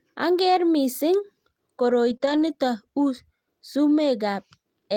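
At 2.09 s the speech turns rougher and noisier until 2.15 s. This is a lost packet rebuilt from error correction. Packets went missing, and the following packets carried low-bitrate copies of them, which is Opus in-band forward error correction. The decoder played those copies instead of leaving a gap. About 40 ms sounds coarse, which fits two lost packets.

At 2.17 s comes a short concealed packet loss. About 20 ms never arrived in time. The receiver stretched the preceding sound across the hole, then blended back at 2.22 s. It is heard as a brief smear.

From 2.22 to 2.52 s the rebuilt-from-copies roughness returns for 160 ms, which points to eight separate lost packets.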